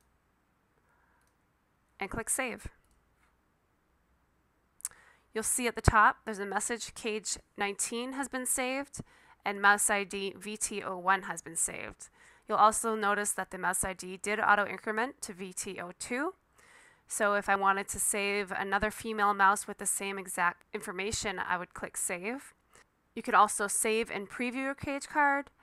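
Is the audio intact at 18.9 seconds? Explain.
Yes, the audio is intact at 18.9 seconds, with no dropout, click, distortion or other fault at that moment.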